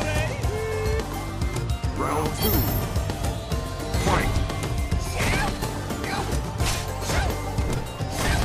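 No technical faults can be heard at any point in the audio.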